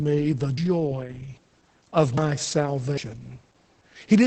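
A short speech recording, carried through heavy Opus voice compression from start to end. The coder is running in its SILK mode. Nothing survives above about 8.7 kHz, so the sound is dull and lacks air. The excitation is coarse, which makes the voice hoarse and a little robotic. The damage points to a rate near 10 kbps, coded in 20 ms frames. There are also three skips at 0.58, 2.18 and 2.98 seconds. Each one drops roughly a fifth of a second. The sound on either side is butted straight together, with no silence, so each skip lands as a sudden jump. This is audio missing between chunks. It is likely caused by a recorder or processor working in 1-second blocks and losing a piece while it hands over from one block to the next.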